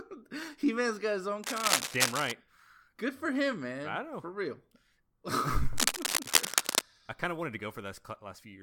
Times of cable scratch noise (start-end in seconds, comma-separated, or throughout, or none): 1.42-2.32, 5.76-6.81